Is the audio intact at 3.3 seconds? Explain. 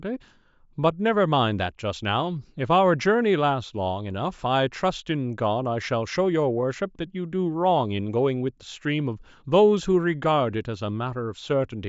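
Yes, at 3.3 seconds the speech is intact, with no dropout, click, distortion or other fault at that point.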